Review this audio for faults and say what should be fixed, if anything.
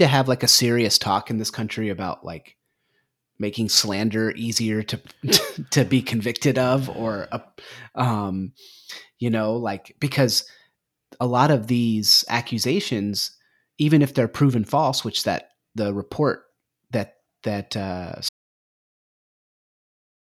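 Audio dropout to silence from 18.29 s to the end: the speech cuts off into silence with no room tone, likely a lost input while recording continued. Prevent this by securing cables and links, checking mute states, and monitoring input levels until the take ends.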